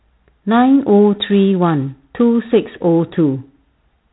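Throughout, the speech has passed through G.726 ADPCM, coding each sample as a few bits of difference from an adaptive prediction. The coarseness fits the 24 kbit/s mode: a harsh, rasping hiss rides on the voice and follows its level, and nothing above 3.9 kHz survives.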